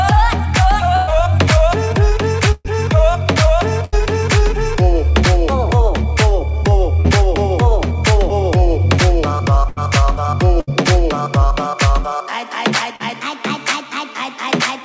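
Bursts of packet loss at 0.96–1.10 s, 2.52–2.68 s and 3.85–3.95 s: runs of late or lost packets, up to about 120 ms each, were bridged by stretching the last sound into a fading buzz or hiss before playback jumped ahead, leaving the middle missing. The second burst also drops briefly into silence. Short concealed packet loss at 7.00–7.07 s and again at 12.96–13.03 s: about 40 ms never arrived in time, and the patched continuation blends back in as a quick smear or wobble. Repeated packet loss (robotic sound) from 9.68 to 10.75 s: three separate gaps, the longest about 78 ms, each filled by extending the previous sound, giving a choppy stretch with pieces absent. Throughout, the band stops at 8 kHz, which fits a wideband call codec such as G.722 at 64 kbps.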